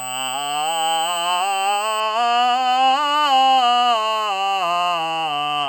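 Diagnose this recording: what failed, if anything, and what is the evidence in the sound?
USB whine in the analogue power and ground path: a steady, fixed-pitch tone at 8 kHz sits over the music from 0.0 s to 2.0 s, roughly 15 dB below the program, then stops. The pitch matches the bus's 125-microsecond microframe rate, so current pulses from USB traffic are leaking through the supply or ground into the converter's analogue side. A spectrogram shows a thin, unwavering horizontal line at 8 kHz ending sharply at 2.0 s.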